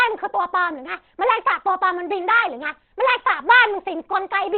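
From start to end, the speech sounds muffled and hoarse. Nothing is heard above 4.3 kHz. This is likely Opus compression in its narrowband speech mode, which fits a low bitrate near 16 kbps. The coding damage is plainly audible throughout.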